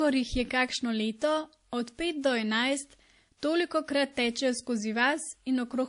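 Speech, with transcoding between lossy codecs audible across the whole clip. The band is empty above about 10.6 kHz, and the dull, smeared top end carries two layers of coding artefacts at once: artefacts of a low-rate MP3 stage, overlaid by a second codec's own quantisation noise. The likely cause is an MP3 encode at around 40 kbit/s re-encoded to WMA at around 64 kbit/s, where the higher second rate cannot recover what the first stage discarded.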